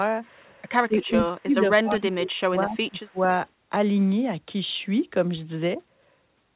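A speech clip, band-limited to nothing above 4 kHz, which fits a narrowband call codec such as G.711 A-law. The speech dips twice, from 0.88 to 1.54 s and from 1.82 to 3.28 s. The first dip totals under half a second and drops by about 20 dB. The second adds up to about a second, falling by about 25 dB. This is likely speech suppressed in double talk: the canceller turned this talker down while the far side spoke. From 1.97 to 2.06 s, a faint delayed copy of the speech appears. It trails by 234 ms, sitting about 25 dB below the speech. This is likely an echo leak. The far end's canceller probably missed some loudspeaker sound, and its microphone sent that scrap back.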